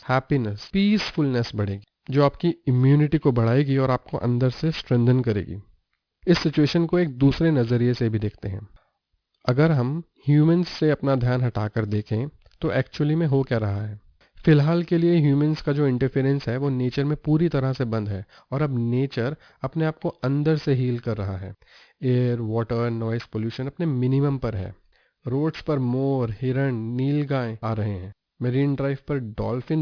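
Aliasing runs through the whole speech clip. The audio was resampled to a lower rate without first filtering out content above the new limit. That limit sits at 5.5 kHz, which fits a rate of 11 kHz. Energy above it folds back down to false, unrelated frequencies. The folded energy sits roughly 25 dB below the wanted sound. Sibilants turn gritty and metallic. The spectrum stays full right up to the 5.5 kHz edge.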